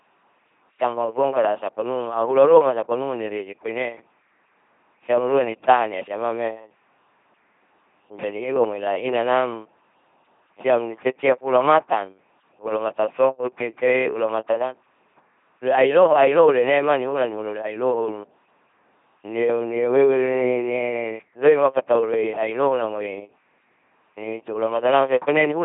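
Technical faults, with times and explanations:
Throughout: LPC-10 vocoder. The speech is heavily damaged into a buzzing robot voice with nothing above 3.8 kHz, which fits a 2.4 kbit/s vocoder. Each instant is rebuilt from either a pulse train or noise, never a mix, so misjudged voicing gives stray buzz or hiss rather than a waveform codec's warble.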